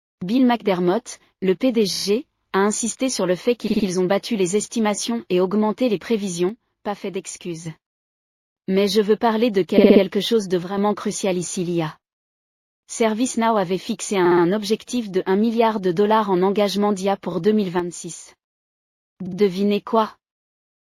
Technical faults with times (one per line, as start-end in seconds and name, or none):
1.93-2.05 repeated frames
3.67-3.86 repeated frames
6.49-7.66 one channel drops out
9.77-10.02 repeated frames
10.63-10.77 one channel drops out
14.25-14.43 repeated frames
17.32-17.35 repeated frames
17.79-18.28 one channel drops out
19.26-19.38 repeated frames